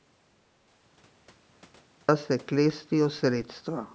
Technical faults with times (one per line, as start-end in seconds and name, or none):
0.00-2.08 audio dropout to silence